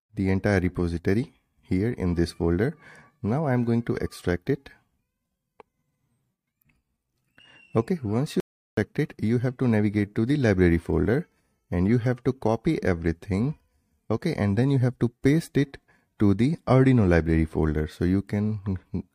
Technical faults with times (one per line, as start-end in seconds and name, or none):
8.40-8.77 audio dropout to silence